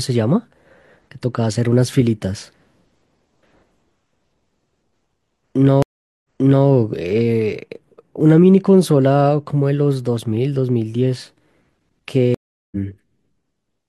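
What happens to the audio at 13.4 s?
Nothing goes wrong at 13.4 s; the speech there plays through intact, with no dropout, click or distortion.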